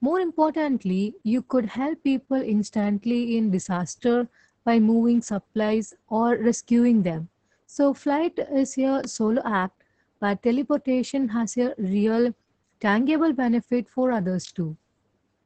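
Opus voice compression runs through the whole clip. The speech has been squeezed through the SILK linear-prediction coder in wideband mode, working in 20 ms frames, with nothing left above about 9.1 kHz. The excitation between the predicted spectral shapes is coded very coarsely, which fits a bitrate around 10 kbps, and the damage is heavy: the speech sounds muffled, hoarse and faintly robotic, with the crispness of the upper band gone.

A loud pop hits at 9.04 to 9.06 s, a single sharp click peaking a few decibels above the speech. It is most likely a sudden voltage pulse from a plug, switch, static discharge or driver glitch, shaped by the circuitry that follows into a brief transient. The speech continues underneath it without a break, so the pop sits on top of the sound rather than replacing it.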